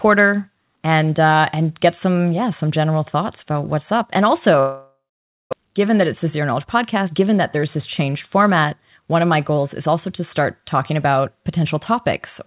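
At 4.6 s the sound cuts out until about 5.55 s, most likely a long network dropout. The receiver first stretches the last bit of sound into a fading buzz, then goes quiet for roughly half a second, and when the audio resumes about 0.6 s of material is simply gone. The stall also leaves the buffer holding around a third of a second more audio than it wants.

From 5.62 s to 9.89 s, ending just before "to start talking about", you get a jitter buffer speed-up. To work off that extra backlog, the receiver keeps snipping out tiny pitch-period-sized pieces, about 300 ms in total. The sound runs at roughly 107% speed with no change in pitch, so it comes across as slightly rushed. Through all of this, the call path's G.711 A-law coding leaves nothing above 4 kHz, giving the usual narrowband phone sound.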